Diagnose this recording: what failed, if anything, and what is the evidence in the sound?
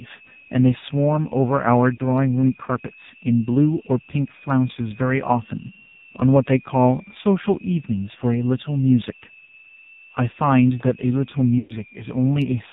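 There's a thin whistle sitting under everything, wandering between about 2.4 and 2.8 kHz at roughly 25 dB below the signal. That's a switching supply whistle: a nearby power supply cycling at an audible rate and leaking into the analogue wiring or mic path before anything got digitised.

The whole clip has that boxy, buzzy, strongly robotic quality, with nothing above 4 kHz. That's the AMR narrowband mobile codec on the call path, and the damage is heavy. The vocal-tract model is being fed very few bits, which fits a low mode around 5.9 kbps.

You'll also catch lost AMR speech frames on the network leg. There are short hiccups at 1.96 to 2.00 s and 9.46 to 9.49 s, each about a single 20 ms frame. At 11.58 to 11.75 s it's worse: about 120 ms where the decoder stretches the last good sound and fades it down, then comes back a bit rough.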